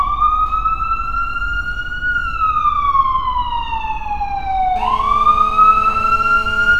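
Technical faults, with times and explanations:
4.76 to 6.75 s, GSM phone buzz: a hard, raspy buzz enters and holds steady to the end of the sound, pitched at about 217 Hz and thick with harmonics, sitting roughly 17 dB below the signal and bearing no relation to it. A nearby 2G phone in a call transmits in pulses at that rate, and the audio circuitry rectifies the radio bursts into an audible square-edged tone, hence the constant, gritty character.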